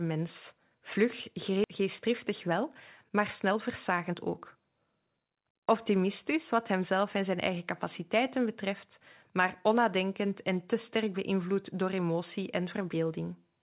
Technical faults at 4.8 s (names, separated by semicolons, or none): jitter buffer speed-up